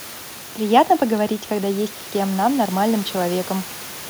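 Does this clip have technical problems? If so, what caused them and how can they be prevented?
No, nothing technical goes wrong in this speech clip; there's just some ordinary room noise in the background, sitting about 16 dB below the voice, which is simply part of the recording space.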